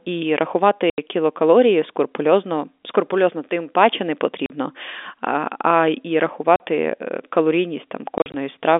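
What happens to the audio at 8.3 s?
The speech breaks up into short dropouts with hard edges between 8.18 and 8.34 s. Across those 160 ms, about 80 ms of sound is replaced by dead silence, in gaps no longer than 40 ms, which fits packets of roughly 20 ms. This is packet loss filled with silence: packets never reached the receiver, which played nothing in their place, so the waveform stops and restarts abruptly at each gap.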